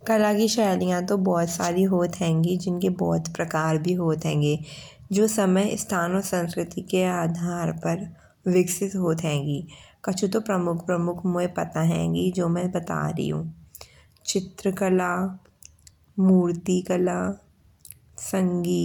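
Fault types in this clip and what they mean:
No fault types are present in this clip.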